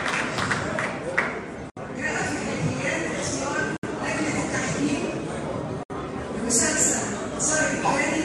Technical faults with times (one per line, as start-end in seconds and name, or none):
1.70-1.77 gap at a join of encoded pieces
3.77-3.83 gap at a join of encoded pieces
5.83-5.90 gap at a join of encoded pieces